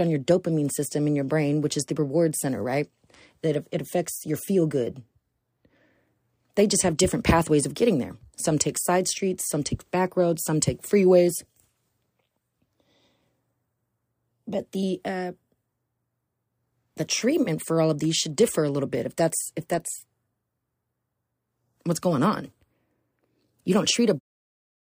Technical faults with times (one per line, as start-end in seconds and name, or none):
none